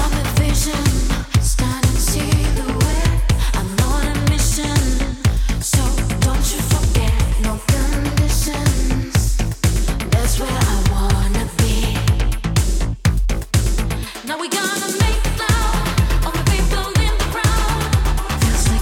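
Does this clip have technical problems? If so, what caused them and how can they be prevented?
Yes. A sudden voltage step, likely from a connector being plugged or a switch being flipped somewhere in the chain, was added to the signal, and the following circuitry shaped it into pulses. The result is a loud pop, heard as two sharp pops in quick succession between 17.58 and 17.79 s, peaking a few decibels above the surrounding audio, with the sound continuing underneath. To prevent it, mute or power down the signal chain before changing cables or switches, and keep equipment properly grounded.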